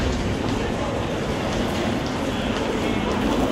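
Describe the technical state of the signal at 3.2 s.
At 3.22 s there is damaged data in a compressed stream. It lasts only a few milliseconds. Part of the encoded stream at that point was corrupted, through lost, zeroed or overwritten bytes. The decoder misreads the affected frame, drops out of sync and hunts for the next valid frame header before playback of these sounds resumes. The result is a short, abrupt blip cutting across the audio.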